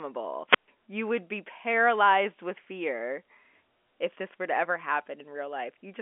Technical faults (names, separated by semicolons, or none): wireless microphone squelch dropout